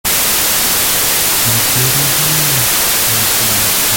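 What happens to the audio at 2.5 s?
At 2.5 s, as across the whole clip, the speech suffers from a wrong sample width: 32-bit integer samples are being read as 16-bit. Each sample splits into two values, one carrying the real signal's top bits and one mostly noise, so the speech sits buried in loud hiss, at half speed and an octave low.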